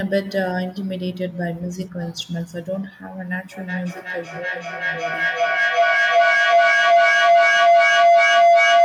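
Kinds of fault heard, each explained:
Feedback howl: from 3.52 s to the end, a microphone re-captures a nearby loudspeaker on the same call, so each trip round the loop returns louder. The sound narrows to a tone near 700 Hz that builds with repeats roughly every 0.4 s and peaks about 11 dB above the speech.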